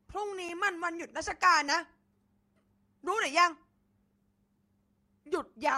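At 0.49 s and again at 1.43 s the speech drops into a block of digital silence, about 5.8 ms and 1.5 ms long, fitting buffers of 256 and 64 samples left unfilled in time. Each heard as a sharp tick; the waveform shows a flat near-silent run with abrupt edges, the spectrogram a thin full-height vertical line.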